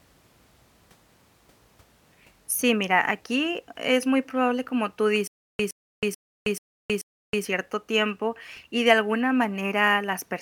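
From 5.27 to 7.45 s comes a stutter with silent gaps: one 116 ms fragment repeats five times, 435 ms apart, with dead silence rather than new audio between, likely a stalled stream.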